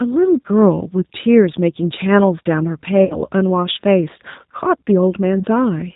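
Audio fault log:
throughout G.729 codec: the speech is band-limited with nothing above 4 kHz and has a plainly rough, synthetic edge, which fits G.729A at 8 kbit/s rebuilding each 10 ms frame from a vocal tract filter, pitch predictor and a few pulses.
3.05–3.22 s and 5.39–5.44 s VoIP packet loss concealed by the speech codec: about 50 ms and then 20 ms of audio go missing. The decoder extends the last pitch and filter with falling gain into a fading buzzy tone or coloured noise, and the first gap stays weakened as frames rebuild.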